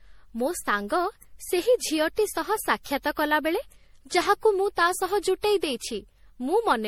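Speech throughout with a swirly, hollow, smeared quality, and consonant attacks blurred, more than a single lossy pass would produce. The likely cause is generation loss: repeated MP3 decoding and re-encoding, around seven times, at a rate that fits 64 kbit/s, each pass requantising on a shifted frame grid. On a spectrogram, the energy breaks into flickering holes and blotchy patches, with nothing above 20.4 kHz. The waveform shows softened, smeared transient edges.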